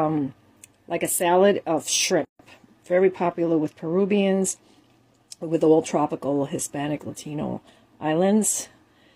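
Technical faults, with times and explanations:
2.25–2.39 s: gap at a join of encoded pieces. A silence of about 145 ms cuts into continuous sound, left by encoder start delay and last-frame padding kept at a splice. The waveform drops to flat, and the spectrogram shows a blank vertical band with smeared edges.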